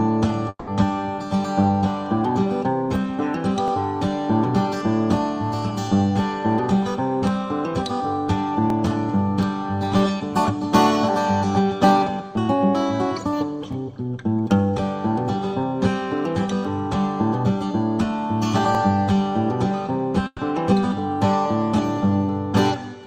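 From 0.49 to 0.70 s the sound breaks off and is replaced by a fading buzz or hiss for about 180 ms, then roughly 50 ms of silence before it resumes, with that stretch missing. This is likely a long network dropout: the receiver ran out of incoming data and kept extending the last sound until it decayed to nothing.

At 3.68, 8.70, 13.73 and 18.75 s there is a brief stutter-click, each a 23 ms slice played twice. These are overlapping chunks: the audio was handled in 5-second blocks that each start slightly before the previous one ended. Unlike a loss, nothing is missing here. A piece is doubled, and it happens at a strictly regular interval.

From 20.27 to 20.42 s a burst of packet loss cuts the audio. About 120 ms of it is covered by a concealment tail that fades out, then about 40 ms of silence follows, and the sound picks up further on. It differs from the opening dropout in being shorter and isolated.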